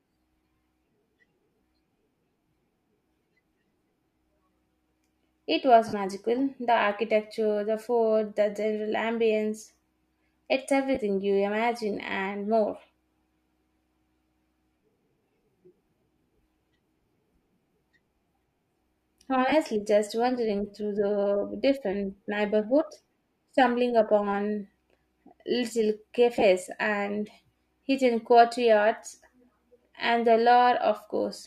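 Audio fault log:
5.88-5.93 s, 10.95 s, 19.49-19.52 s, 26.36-26.42 s: lost LE Audio frames. These are brief, noisy smears lasting 52.5, 15, 30 and 30 ms. The second comes just before "you imagine and more". The last is split into short bursts spread over 60 ms, just before "and hidden courtyards". The decoder filled each gap by replaying the last spectrum with randomised signs.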